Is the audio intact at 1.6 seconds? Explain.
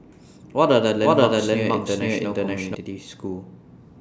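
No. From 0.91 to 2.75 s a doubled audio track runs: a full-band copy of the speech trails about half a second behind at roughly equal level, likely from a second, slower capture path. Spectrogram and waveform show shapes repeating, shifted right, with abrupt edges.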